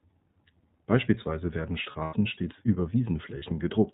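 Throughout, the speech is band-limited at 4 kHz and has a rough, slightly synthetic grain. That is the iLBC codec at work. Each frame's excitation is coded on its own, which fits 30 ms frames at around 13.3 kbps. The damage is plainly audible, and it is grainier than a simple low-pass would make it.

From 1.83 to 2.14 s, just before "stets über", lost iLBC frames break the sound. About 150 ms goes missing in scattered pieces, and the longest gap is about a tenth of a second. A second, single loss of about 30 ms at 3.38 to 3.43 s comes right after "stets über". Instead of silence, each gap carries a held, buzzy vowel-like tone made from the repeated last pitch cycle. Clean speech returns immediately afterwards, with no smeared recovery.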